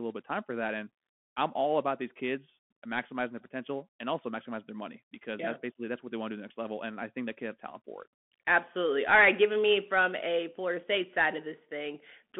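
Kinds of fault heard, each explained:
Bluetooth CVSD headset codec: The whole speech clip sounds like it went through a Bluetooth headset's CVSD link, one bit per sample saying step up or step down, at a rate that fits 64 kbps. The band sits roughly between 200 Hz and 3.4 kHz, so the low body and all the air are gone. The coding damage is plainly audible: a gritty, granular hiss under the speech, s sounds scratchy, and the loud bright peaks distort where the step size can't keep up.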